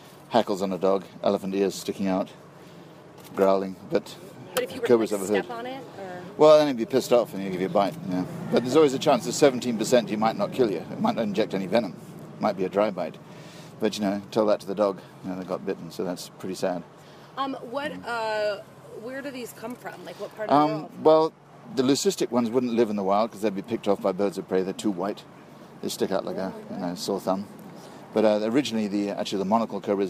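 A drift correction step from 17.72 to 19.82 s slows the audio by 5.67% and drops pitch 101 cents, likely clock-sync rate adjustment. Spectrogram harmonics sag, then snap back.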